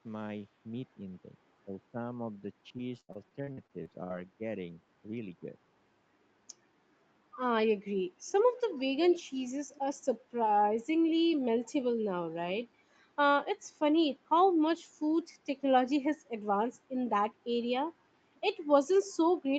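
Speech suppressed in double talk runs from 0.67 to 5.56 s in this speech recording: the level dips by roughly 10 dB, about two seconds in total, most likely because an echo canceller mistook overlapping talk for loudspeaker echo and turned everything down. Repeated packet loss (robotic sound) overlaps it from 2.77 to 4.12 s. Short holes, the longest 79 ms, are patched by stretching the previous sound, leaving choppy audio with about 23% of that span concealed, which fits roughly nine separate losses. The call path's 8 kHz upper limit applies throughout.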